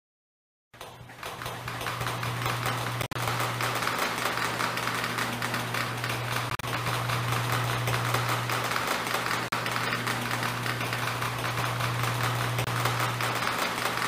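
At 3.02 s, 6.50 s, 9.48 s and 12.64 s the audio drops out briefly, most likely a Bluetooth dropout where data reached the headphones too late and was discarded. The first two break up over about 0.13 s into several short silences, with the longest stretch about 53 ms and 40 ms. The last two are single gaps of about 40 ms and 27 ms. Each time the sound resumes further on, as if it had kept playing. On a waveform or spectrogram these show as sharp-edged vertical blank strips.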